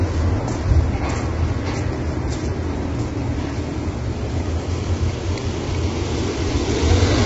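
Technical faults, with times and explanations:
Throughout: low-delay AAC compression. The sound is rough and grainy, with noise filling the gaps between harmonics and nothing above 7.8 kHz. This is likely AAC-ELD at heavy damage, which fits a bitrate near 16 kbps. Its short frames resolve harmonic detail poorly.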